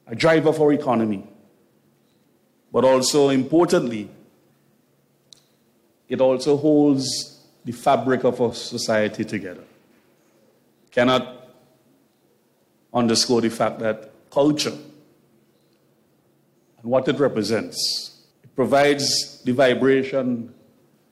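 At 8.5 s, compressed frames are skipped: about one frame, roughly 20 ms of audio with a frame length of 23.2 ms, never plays, so the sound jumps ahead. A waveform shows a small discontinuity, and a spectrogram shows a thin vertical seam.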